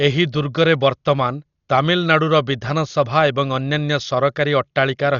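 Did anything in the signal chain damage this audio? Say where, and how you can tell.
Yes, at the codec stage, and it runs through the whole speech clip. Nothing comes through above 7 kHz, so everything sounds dull, and there's a rough, fluttering noise sitting around the voiced tones. That pattern is likely Dolby Digital compression pushed hard, which fits a bitrate down around 40 kbps. The encoder narrowed the band and starved many frequency lines of bits, and the decoder filled those gaps with dither noise.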